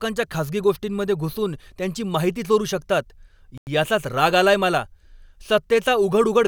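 At 3.58 s the playback likely hit a Bluetooth stall: radio interference held back packets on the wireless link, the headphones' small buffer emptied, and output stopped until the resent packets came through. The speech drops to complete silence for about 93 ms, from 3.58 to 3.67 s, right after "त्यांची माहिती चोरू शकतात", then resumes abruptly with "याचाच राग आलाय मला", leaving a brief hole in the flow of the speech.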